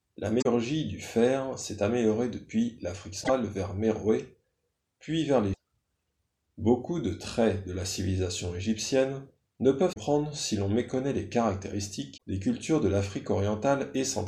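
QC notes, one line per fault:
0.38–0.46 s, 3.20–3.30 s, 5.53–5.57 s, 9.89–9.97 s and 12.14–12.22 s: damaged data in a compressed stream. Each event is a brief blip of about 50 to 100 ms. Corrupted bytes make the decoder misread frames, lose sync and hunt for the next valid header.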